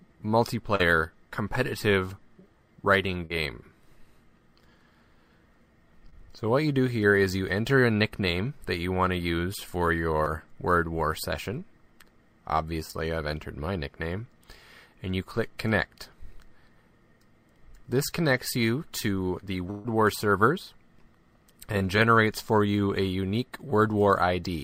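Short concealed packet loss strikes at 0.75 s and 3.25 s, where about 40 ms of audio failed to reach the decoder in time, then at 6.10 s and 10.23 s, where about 20 ms went missing. The receiver bridged each hole by extending the preceding sound and blending back into the real signal. At 6.10 s and 10.23 s it also trimmed a few milliseconds to catch up. Each gap comes across as a brief smear or wobble.

A burst of packet loss follows at 19.71 s. About 140 ms in a row went missing, and the receiver continued the last sound while fading it down across the whole gap. This produces a held buzz or dwindling hiss lasting about a seventh of a second, after which the audio resumes further along with that stretch gone. A final short concealed packet loss at 21.78 s fills another roughly 20 ms hole, giving one more quick smear.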